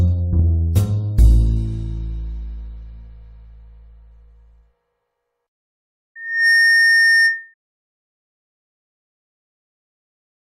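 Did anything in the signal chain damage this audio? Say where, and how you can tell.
Yes: loudspeaker feedback squeal, 6.15 to 7.54 s, in the analogue mic-speaker loop. A 1.8 kHz tone swells within a third of a second as the loop's gain exceeds one.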